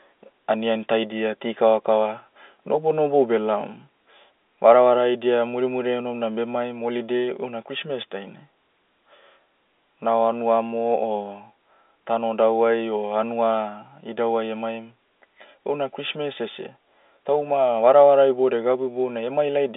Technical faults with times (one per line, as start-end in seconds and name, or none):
16.49-16.53 microphone overload
18.72 microphone volume stepped down